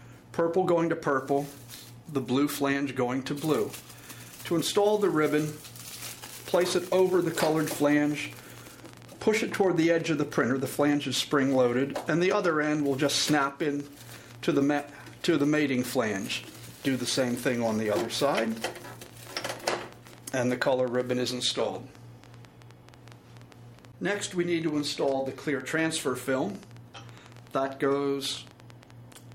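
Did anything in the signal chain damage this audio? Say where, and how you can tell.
Yes. A train of clicks runs from 5.91 s to 29.33 s, about 8.7 per second at an uneven pace. That's roughly two hundred similar pops, as loud as the audio itself and audible in pauses. Likely cause: interference from nearby equipment on the analogue wiring, or a faulty connection or power supply.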